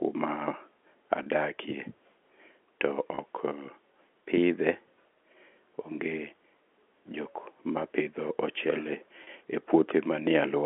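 At 1.23 s, 3.15 s and 9.24 s the speech briefly holds a slightly buzzy tone for 30 ms. This is packet loss with pitch repetition: each gap, consistent with one lost packet, is filled by repeating the last pitch period before speech resumes on the narrowband telephone channel.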